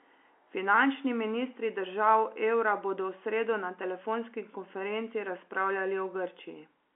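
No technical faults detected.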